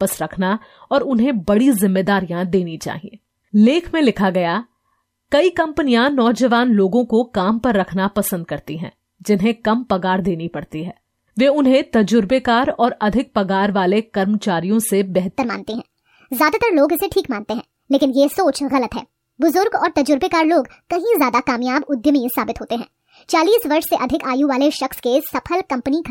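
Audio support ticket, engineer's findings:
Wrong sample rate from 15.38 s to the end: speech turns chipmunky and rushed, 1.38x fast and about 5.6 semitones up. Fits 32 kHz material played out at 44.1 kHz with no resampling. Check the playback or conversion stage.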